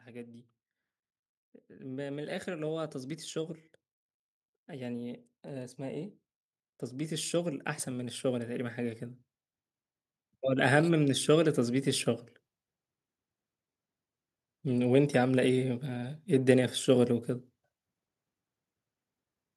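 At 1.42 to 3.64 s, 6.93 to 9.3 s and 10.25 to 11.93 s the speech shows automatic gain rising: the gain control judged the input too quiet and pushed its gain up by about 4 dB each time. The swell spreads over roughly two seconds, and the background noise lifts along with the voice. That shared, gradual climb marks it as gain control, not a talker moving closer or an abrupt level step.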